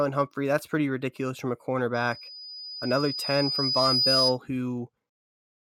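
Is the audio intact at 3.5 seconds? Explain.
No. At 3.5 s the speech is covered by loudspeaker feedback squeal, which runs from 1.94 s to 4.38 s. A microphone is picking up the loudspeaker it drives, and at 5 kHz the loop gain exceeds unity, so that frequency keeps reinforcing itself. It is heard as a single piercing tone that swells over roughly two seconds, still building at 3.5 s, and reaches around 5 dB above the speech, continuing until the squeal stops.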